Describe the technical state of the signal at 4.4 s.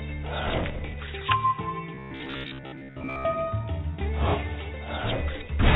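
At 4.4 s the signal is intact, with nothing wrong beyond the expected character of the telephone-band call path, whose mu-law coding carries nothing above 4 kHz.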